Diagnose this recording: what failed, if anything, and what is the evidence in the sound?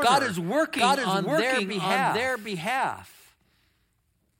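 A doubled audio track runs through the whole speech clip: every stretch of speech is followed around 0.7 s later by a second, full-band copy at roughly the same level. The copy has no decay or room colouring, so it is not an acoustic echo. It is the same signal mixed in twice at a fixed offset, most likely from a second capture path or monitoring route being recorded alongside the direct one, or an edit that left two out-of-step copies layered together.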